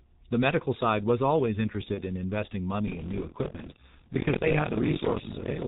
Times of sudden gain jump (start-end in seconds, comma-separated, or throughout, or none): none